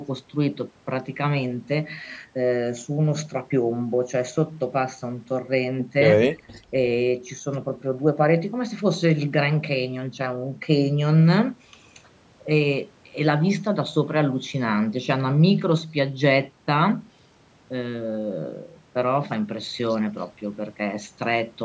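From 6.34 to 6.48 s the speech briefly sinks by roughly 15 dB for about a tenth of a second before recovering. This is most likely speech suppressed in double talk: with both ends active, the echo canceller mistook the near talker for returning loudspeaker echo and attenuated everything. A packet-loss dropout would instead leave a hard gap or a synthetic smear. The audio's band stops at 8 kHz.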